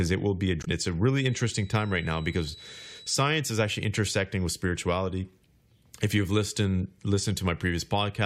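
At 0.61 to 0.68 s, right after "it will be a", there is damaged data in the compressed stream. Corrupted bytes make the decoder misread frames and lose sync. It hunts for the next valid header. The result is a brief glitch.

From 1.12 to 3.29 s a thin, steady tone near 3.9 kHz sits roughly 25 dB below the speech. It swells and fades slowly in level, then stops just before "is actually intersecting with". This is likely a feedback whistle, with the speaker-to-microphone loop hovering at the edge of ringing.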